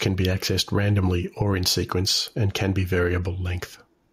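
Gain pumping runs through the whole recording, with the gain swinging by around 5 dB. Likely the input gain was set too hot and a fast limiter keeps clamping it, leaving the speech squashed.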